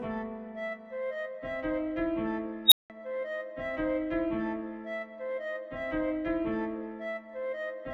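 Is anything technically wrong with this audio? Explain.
Yes. At 2.66 s an unstable filter takes over: a recursive filter in the chain is running with coefficients that make it feed back on itself, so its output grows without bound instead of settling. A squealing tone around 4 kHz swells to clipping in about 62 ms, then the arithmetic overflows and the output collapses into roughly 0.18 s of silence until the filter resets, with the whole event over by 2.90 s.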